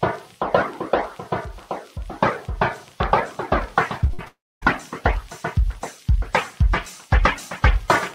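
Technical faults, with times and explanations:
3.03–3.05 s, loud pop: A single sharp pop sits on top of the sound, which carries on beneath it. It peaks about 10 dB above the signal. This is likely a sudden voltage step, perhaps from a switch, plug or static discharge, that the following circuitry shaped into a brief pulse.
4.01–4.28 s, repeated packet loss (robotic sound): The sound turns choppy. Several short holes follow one another, the longest about 51 ms, totalling about 120 ms lost. Each hole is filled by stretching the last sound, so roughly 40% of this stretch is patched rather than real.
4.28–4.64 s, long network dropout: About 340 ms of audio never arrives. This is likely a network dropout. The last sound is continued as a fading buzz, then about 260 ms of silence follows. The sound resumes afterwards, and the lost portion is simply gone.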